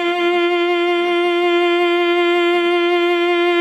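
Music clip: no faults heard.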